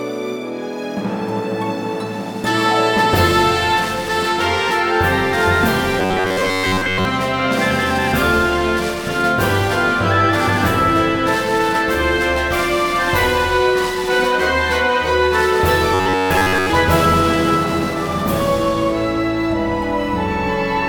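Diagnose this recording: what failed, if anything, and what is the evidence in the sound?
Something went wrong at the driver or buffer stage. From 6.00 to 7.05 s and again from 15.94 to 16.71 s, the sound turns into a robotic, metallic buzz with a fixed pitch near 94 Hz, while the underlying audio still comes through roughly. The likely cause is robotic sound from repeated short buffers: new data arrived too slowly, so a segment of about 10.7 ms was replayed over and over, replacing most of the real audio in those stretches.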